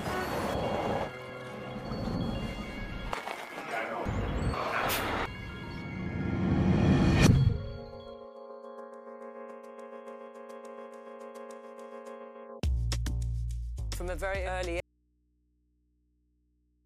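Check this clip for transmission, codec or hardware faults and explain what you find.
One fault is present. From 14.80 s to the end, an audio dropout to a faint residue: the signal cuts off abruptly and only mains hum remains, roughly 40 dB below the programme level. The likely cause is a lost source feeding a still-live input stage, leaving the open input's hum in the gap.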